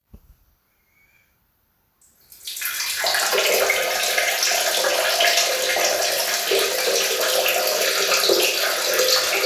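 No technical faults are audible anywhere in this recording.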